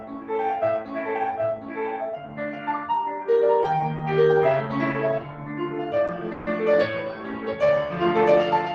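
It's a music clip running through a speech-tuned noise suppressor, and it shows. The processor keeps treating sustained parts of the music as noise, so levels swing by something like 10 dB across the clip, with held sounds and tails sinking while attacks get through. The clearest dips where the suppressor cut the sound are 0.0–0.3 s (about 9 dB down), 0.81–1.0 s and 1.57–1.78 s (about 8 dB each), 2.17–2.67 s (about 7 dB) and 5.21–5.58 s (about 6 dB). The result is a pumping, fluttery or thinned-out feel rather than steady sustain. Then there are two short stalls from late packets, at 3.78–3.82 s and 6.07–6.11 s. Each time the receiver ran dry and stretched the last bit of sound for about 20 ms, then carried on from the same point. Nothing is actually lost, but you get a tiny hold with a slight buzz or dip. Just after that, at 6.33–6.49 s, there's a longer call audio freeze: the sound is held and extended for about 140 ms as a fading buzz or hiss, without dropping to silence, before picking up exactly where it left off. 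The likely cause is packets held up in transit that emptied the jitter buffer, so the audio is delayed rather than skipped.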